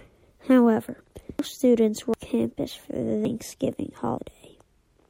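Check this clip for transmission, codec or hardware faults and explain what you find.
The speech carries four abrupt skips at 1.39, 2.14, 3.25 (just after "for the") and 4.18 s, each a jump in the sound. These are likely dropped buffers (overrun): samples went uncollected and were overwritten, so the edges join directly. Roughly a third of a second vanishes at the first two, about a tenth at the last two. Unlike an underrun, no silent gap appears. The sound simply lurches forward.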